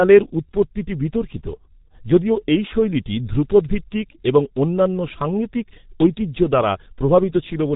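Speech runs through the G.723.1 codec for the whole clip, and the damage is heavy. Nothing survives above about 3.8 kHz, so the sound is muffled and the top end of consonants is simply gone. The low rate, which fits about 6.3 kbit/s, and the slow 30 ms frame updates smear the voice model, leaving a hoarse, rough texture and blurred consonant edges from start to finish.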